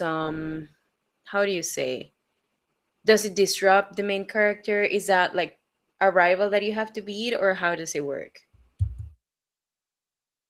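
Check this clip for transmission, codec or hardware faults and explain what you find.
One codec fault runs through the whole clip: Opus voice compression. A starved hybrid coder, at a rate suggesting about 16 kbps, codes the excitation coarsely, leaving the speech audibly hoarse and slightly robotic.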